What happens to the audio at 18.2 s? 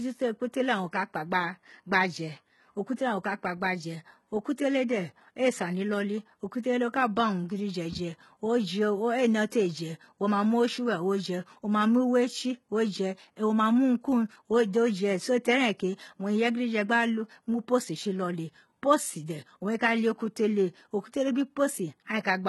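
At 18.2 s the speech carries the heavy damage of likely HE-AAC compression, present across the whole clip at a very low bitrate, around 16 kbps. Its treble is copied up from lower bands, so s sounds turn gritty and lispy. A spectrogram shows smeared, repeated upper bands ending sharply at 11.8 kHz.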